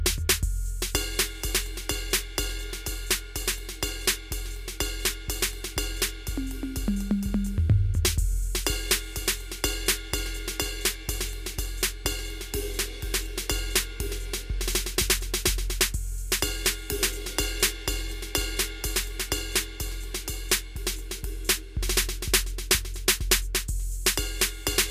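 The music carries no audible technical faults at any point in the clip.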